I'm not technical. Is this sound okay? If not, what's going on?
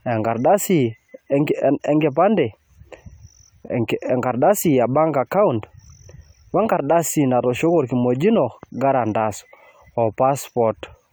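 No. Throughout the speech there's a swirly, hollow, smeared quality, and the starts of sounds are blurred. This is generation loss, likely from the recording being compressed and saved again about three times, with each pass adding its own damage.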